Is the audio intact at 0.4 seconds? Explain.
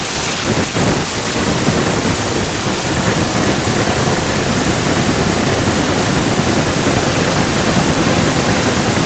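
No. From 0.00 to 1.36 s an echo leak is audible: a delayed copy of the speech returns about 369 ms late, roughly 10 dB below the direct sound. This is likely a far-end loudspeaker whose echo canceller failed to fully remove what its microphone picked up.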